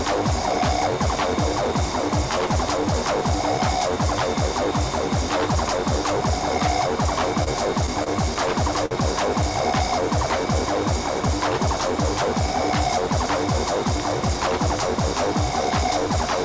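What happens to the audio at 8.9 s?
At 8.86 to 8.93 s there is a short stall from a late packet: the jitter buffer ran dry, so the receiver stretched the last sound by about 52 ms until the packet arrived. Nothing is lost, but everything afterwards runs 52 ms late. It is heard as a held sound with a slight buzz or dip, and on a spectrogram as horizontally smeared, repeated frames.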